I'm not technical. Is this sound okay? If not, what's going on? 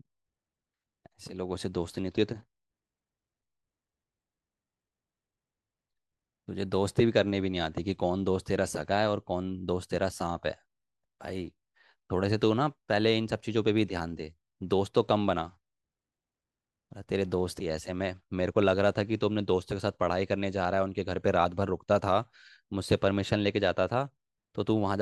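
Yes, no technical faults show up anywhere in this speech recording.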